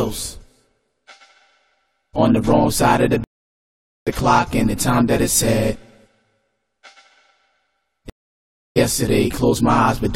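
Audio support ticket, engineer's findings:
Stream reconnect, twice: dropout 3.24 to 4.07 s (about 0.82 s dead air), again 8.10 to 8.77 s (about 0.66 s). Connection drops, player reconnects and spins up a fresh decoder mid-stream, and the audio comes back roughly half a second further along, so that bit's just gone.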